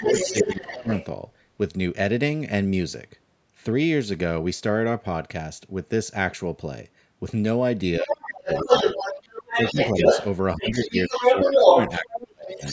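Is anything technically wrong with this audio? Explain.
Yes. Two faults recur wherever both sides talk at once.

Speech suppressed in double talk occurs at 0.0–0.9 s, 8.01–8.98 s, 9.53–9.97 s and 10.57–12.63 s. The talker's speech dips or chops out, deepest near 8 to 9 s at roughly 30 dB. The likely cause is an echo canceller that cannot separate near and far talkers and so turns both down. Unlike a network dropout, these gaps line up with the second voice.

The other side's voice is leaking through at 0.0–1.06 s, 8.09–10.26 s and 10.63–12.72 s. A second voice comes through alongside the speech, about 5 dB below it at the start and about 5 dB above it later. The likely cause is loudspeaker sound reaching the microphone past an incomplete echo canceller. It is an actual separate voice, not a reverberant smear of the talker's own speech.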